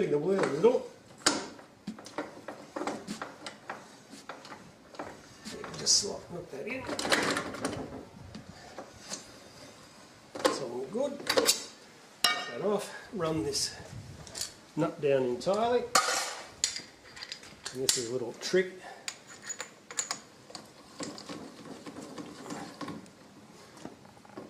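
No technical faults can be heard anywhere in the audio, and the signal stays steady and continuous throughout.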